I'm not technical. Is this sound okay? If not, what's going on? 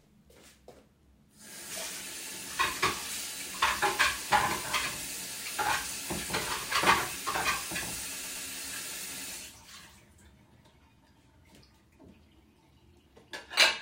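No. There are repeated frames at about 8.22 to 8.46 seconds. A tiny piece of the sound, about 120 milliseconds long, plays three times in a row instead of once, so it briefly stutters. Digital audio is stored in small packed chunks, and here a short run of them was stored or sent twice over, so the player faithfully played them again. Those two extra plays make the clip about 240 milliseconds longer.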